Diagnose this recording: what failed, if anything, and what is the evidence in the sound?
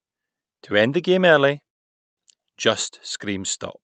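Call audio freeze at the network jitter buffer: after "end the game early", 1.67 to 2.19 s is a blank spectrogram gap, likely from late packets; speech then resumes intact.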